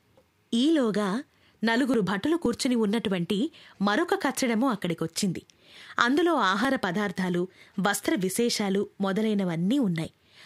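Nothing stood out as a technical fault on listening through the speech.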